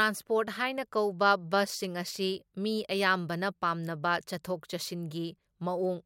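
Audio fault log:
No faults heard anywhere in the speech.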